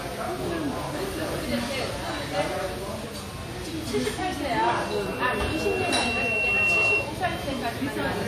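WMA compression runs throughout: the sound rings and smears with a washy hiss that breathes with the signal, and nothing survives above 17.1 kHz. This is likely a transform codec at a low rate, which fits roughly 48 kbps, where quantisation noise spreads across long blocks.

A loudspeaker feedback squeal sounds from 4.65 to 7.14 s: a single 2.7 kHz tone swells over about two seconds until it sits about 5 dB above the sound. A microphone hears its own loudspeaker, and at that frequency the loop gain exceeds one.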